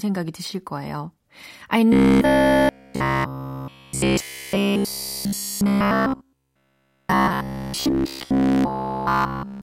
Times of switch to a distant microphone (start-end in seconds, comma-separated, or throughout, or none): none